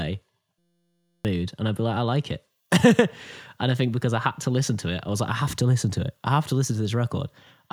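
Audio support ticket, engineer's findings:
System hang loop, 0.59–1.25 s. Speech replaced by a steady buzz at 172 Hz. Probable cause: driver or host stall while the output device kept replaying its ring buffer. A 5.8 ms segment repeats exactly, which fits a 256-sample buffer. About 0.7 s of audio lost. Spectrogram shows a harmonic comb at 172 Hz spacing. Waveform shows an identical short cycle tiled end to end.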